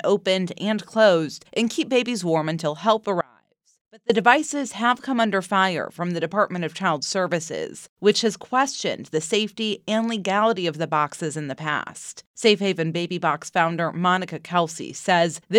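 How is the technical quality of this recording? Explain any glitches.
The recording has one glitch. From 3.21 to 4.10 s there is an audio dropout to a faint residue: the sound cuts abruptly to a faint leak roughly 30 dB down, likely from signal lost upstream while the path stayed live. Its hard edges distinguish it from a pause or fade.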